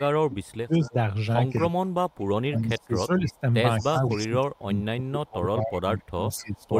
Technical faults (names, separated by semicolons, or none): speech suppressed in double talk; echo leak